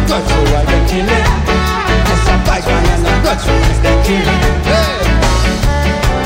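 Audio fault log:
No audible faults found.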